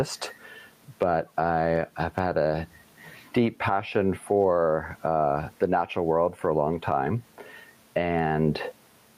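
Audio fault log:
throughout, gain pumping: the gain swings by around 10 dB, likely from gain set far too high with a fast limiter clamping it. The waveform looks squashed, with loud and soft parts closer in level.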